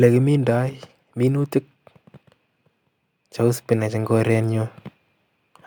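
A speech recording with two automatic gain faults. The first is automatic gain falling, from 0.05 to 0.91 s. The level starts high and then drops by about 4 dB over under a second. The gain control judged the input too loud and pulled its gain down step by step. Because the change happens before the signal, voice and background noise sink together. The room tone fades along with the speech. The second is automatic gain rising, from 3.37 to 4.81 s. Over roughly a second and a half, the level climbs by about 5 dB. Here the control judged the input too quiet and raised its gain gradually. Voice and background swell as one, so the noise floor comes up with the speech. The slow, steady ramp is what marks it as automatic gain control.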